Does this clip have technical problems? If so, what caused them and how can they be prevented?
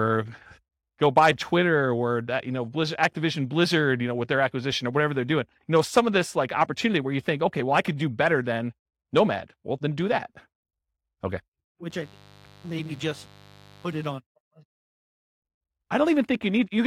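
Yes. Mains buzz runs from 11.90 to 14.07 s: switching spikes from a dimmer, rectifier or unshielded cable enter twice per 50 Hz cycle, stacking harmonics into the kilohertz range, heard as a raspy buzz roughly 25 dB under the speech. Shielded, properly grounded cabling away from dimmers prevents it.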